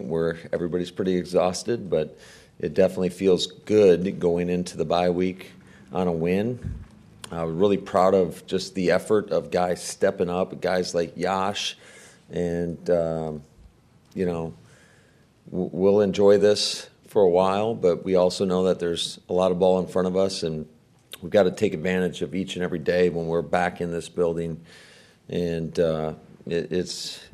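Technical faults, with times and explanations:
No technical faults can be heard anywhere in the audio.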